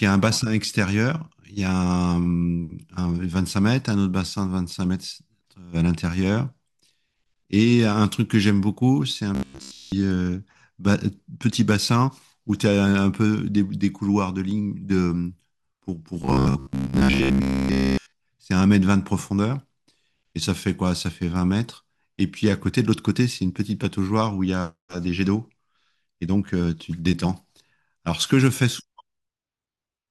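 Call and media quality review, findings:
Robotic sound from repeated short buffers, 9.35 to 9.92 s and 16.22 to 18.12 s. Rigid metallic buzz at 66.8 Hz, a 15 ms loop. First span entirely affected, second mostly. Likely audio arriving too seldom, with playback looping the last buffer.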